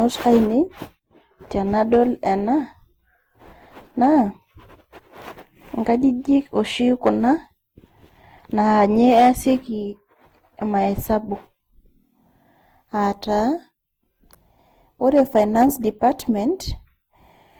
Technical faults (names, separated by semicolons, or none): generation loss